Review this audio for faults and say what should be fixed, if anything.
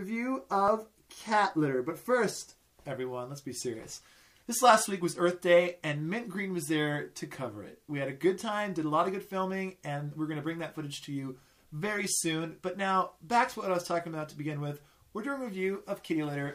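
Nothing to fix: no faults found anywhere in the clip.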